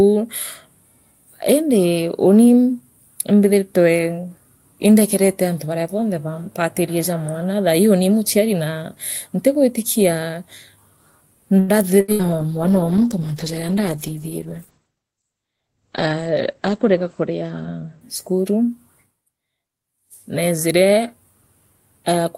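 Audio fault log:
11.59–11.71 s, short stall from a late packet: a packet arrived late and the jitter buffer ran dry, so the receiver stretched the last sound for 90 ms before continuing from the same point. Nothing is lost, but the held sound adds a slight buzzy drag and pushes playback about 90 ms later.
12.00–12.11 s and 12.12–12.27 s, burst of packet loss: two back-to-back runs of packets never arrived in time, each leaving about 80 ms of audio missing. The receiver papered over each gap by extending and fading the preceding sound for roughly 70–77 ms, giving a held buzz or fading hiss before the audio jumps ahead.
12.14–18.99 s, call bitrate drop: the bandwidth estimate collapsed and the encoder went from 48 kbps down to 11 kbps, staying at the bottom for about 4.8 s. The audio band narrowed from 20 kHz to 8 kHz, so the sound turns muffled and rough, with a watery coarseness until the rate recovers.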